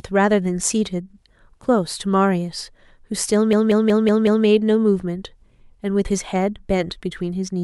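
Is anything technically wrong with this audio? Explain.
Yes. From 3.53 to 4.46 s, a 186 ms speech fragment machine-gun stutters five times at 5.4 Hz. This is a system hang loop: the computer or driver froze while the hardware kept replaying its ring buffer.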